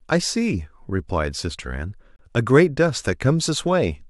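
At 2.16 s there's a gap between stream segments: the sound drops out for about 30 ms with hard edges, right around a 2 s segment boundary. The timestamps didn't quite line up, so the player padded the hole with silence rather than losing anything.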